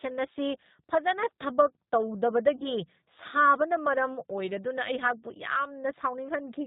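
Throughout, the speech carries G.729 codec damage: rebuilt at 8 kbit/s from a filter and sparse pulses, nothing passes above 4 kHz, and the voice sounds rough and synthetic, unlike ordinary band-limiting. From 2.56 to 2.67 s comes VoIP packet loss concealed by the speech codec. About 40 ms went missing, which fits two 20 ms packets. Rather than a silent gap or click, the decoder stretches the last sound into a buzzy tone or coloured noise that fades, and the voice stays weak or distorted after packets return.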